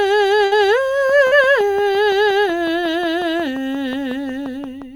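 At 0.45 to 0.53 s a burst of packet loss hits the music. About 60 ms of it was extended from the last sound and faded out, then roughly 60 ms is simply missing before playback jumps ahead. On a spectrogram the harmonics smear flat and dim, then break off abruptly.

From 1.10 s to the end a train of clicks ticks steadily over the music at about 5.7 per second, evenly spaced and roughly as loud as the music itself. The likely cause is electrical interference or a faulty connection. Each click shows as a thin vertical line on the spectrogram and a sharp spike in the waveform.

At 1.27 to 1.33 s a short concealed packet loss leaves a brief smear. About 40 ms never arrived, and the receiver filled it by continuing the preceding sound before blending back. The spectrogram shows a short stretch of frozen, blurred partials, and the waveform a repetitive patch.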